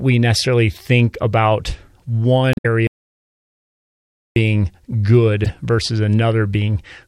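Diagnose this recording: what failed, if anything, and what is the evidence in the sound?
The codec stage failed twice. Damaged data in a compressed stream shows up from 2.51 to 2.66 s and again from 5.44 to 5.50 s. Each spot is a short chirp, squawk, click or hole rather than clean speech. The decoder hit corrupted frames there. It misread them, lost frame sync and hunted for the next valid header.

There is also an audio dropout to silence from 2.87 to 4.36 s. Speech stops in mid-flow and about 1.49 s is simply missing. The gap is silent. No room tone or noise floor survives underneath. That points to the input side, before the encoder. The likely cause is a lost input, such as a disconnected device, a failed link or an accidental mute. Recording carried on and wrote silence, so anything spoken then is gone.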